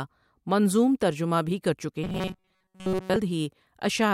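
From 2.04 to 3.17 s, new audio was likely reaching the playback software too seldom, so it kept filling the gaps by replaying its last short buffer while the real signal went missing. This robotic sound from repeated short buffers imposes a steady buzz at 188 Hz on the speech, which fits a repeated chunk of about 5.3 ms. With most of that stretch made of repeats, the voice becomes a rigid, metallic drone that only loosely tracks the speech.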